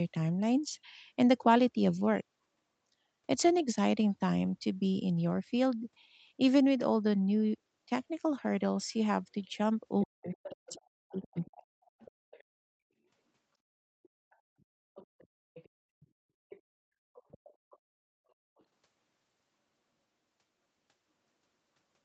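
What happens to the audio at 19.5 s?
At 19.5 s the speech is intact, with no dropout, glitch or distortion, just the ordinary wideband sound of a call that carries nothing above 8 kHz.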